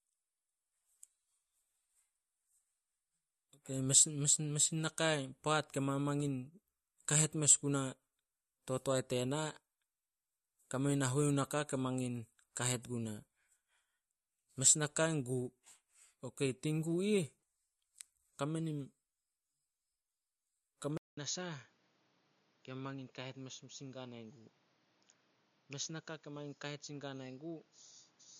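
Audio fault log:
throughout: MP3 compression, likely. Nothing remains above 12.5 kHz, and weak detail flickers in and out between frames, giving a watery, swirly edge to s sounds, which fits a low bitrate around 48 kbps. Unlike a device change, the damage is steady from start to finish.
20.97–28.40 s: input switched to a poorer device, likely. After a 200 ms silence the sound turns duller and boxy, cut off above 6.9 kHz, drops by around 10 dB, and gains a new noise floor roughly 30 dB down. The abrupt change with a gap distinguishes it from codec loss.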